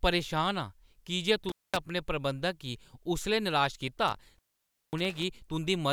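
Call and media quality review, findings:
Intermittent contact, 1.49–1.77 s after "परेशान आं की जे" and 4.08–5.24 s: speech drops out with crackle at the edges, line open for about 220 ms and 540 ms, loose cable or plug.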